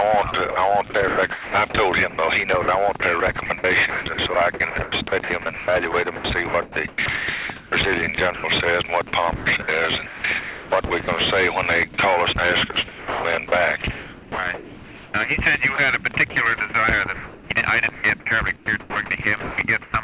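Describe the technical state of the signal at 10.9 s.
Sound chopped by the voice detector affects 10.9 s, within a stretch running from 9.36 to 11.08 s. Across that span the signal cuts in and out repeatedly, with about 740 ms in total replaced by what sounds like synthetic comfort noise. The likely cause is the sender's voice activity detection repeatedly switching transmission off and on, so quieter parts were dropped and filled. The result is choppy, all within a band ending at 4 kHz.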